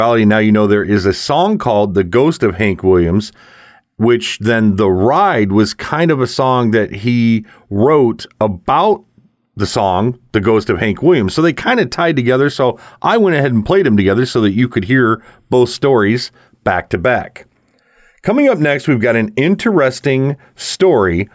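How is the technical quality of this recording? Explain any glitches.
The recording has no audible technical faults, with the speech signal intact and continuous throughout.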